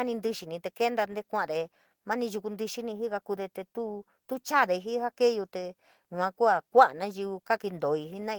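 At 4.31 s there is a lost packet rebuilt from error correction, a 20 ms stretch that fits a single dropped packet. The following packet carried a low-bitrate backup copy, and the decoder played that copy in place of the missing audio. The speech continues without a gap but turns briefly rougher and noisier. On a waveform the envelope stays continuous, while a spectrogram shows a thin, grainier vertical strip where harmonic detail blurs.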